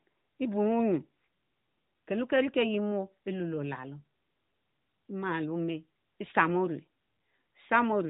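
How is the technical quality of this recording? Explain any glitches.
No glitches to report; the speech carries a narrowband phone-line character, with nothing above about 3.8 kHz.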